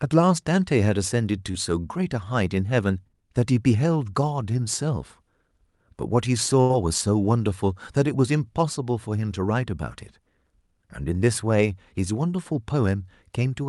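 A speech recording with two network dropouts. At 1.51 to 1.56 s there is short concealed packet loss: about 20 ms never arrived, and the receiver bridged it by extending the preceding sound, so it passes as a brief smear or wobble that blends straight back into the speech. At 6.62 to 6.71 s a burst of packet loss removes about 80 ms. The concealment stretches the last sound across that span while fading it, giving a held buzz or dying hiss, and the speech then resumes further on with material missing. The longer duration sets it apart from the first dropout.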